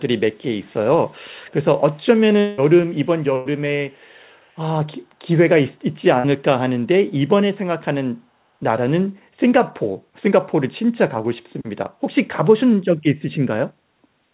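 At 0.63 to 0.75 s, 1.46 to 1.54 s and 2.0 to 2.05 s there are faint traces of echo leak: a copy of the speech arriving about 386 ms late, very quiet, roughly 35 to 40 dB under the direct speech. The likely cause is a far end on a loudspeaker whose echo canceller let some residue through. On a spectrogram these show as weak smudges repeating earlier speech patterns, easy to miss on the waveform.

From 2.4 to 2.6 s comes a long network dropout, likely a stall in packet delivery. About 180 ms of audio never arrived, and the receiver spent roughly 176 ms stretching the last sound into a buzz or hiss that fades, with no stretch of pure silence. The spectrogram shows a smeared, repeating pattern that fades before speech picks up again with the missing part skipped over.

At 3.38 to 3.47 s a burst of packet loss removes about 80 ms. The decoder fills some 78 ms by holding and attenuating the previous sound, so it comes across as a brief held tone or hiss. 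On the waveform the envelope tapers into a smooth, too-regular segment, and on the spectrogram the harmonics freeze flat before fresh speech resumes.

The echo leak returns, longer this time, from 3.91 to 4.36 s: the same 386 ms delay, about 40 dB down, a ghostly trail beneath the speech that shows as faint doubled striations under the main harmonics. All of it sits below the 4 kHz ceiling of the narrowband G.711 call path.

Finally, at 6.19 to 6.26 s, short concealed packet loss covers a 40 ms hole with about 44 ms of synthesised continuation blended back in. It is heard as a small smear or wobble. On the spectrogram it appears as a brief blur where detail and onsets go soft, and the waveform shows a short stretch of repeated cycles.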